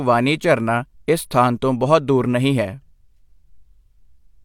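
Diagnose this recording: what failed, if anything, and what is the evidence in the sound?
Nothing failed in this recording, and the sound gives no evidence of a fault at any stage.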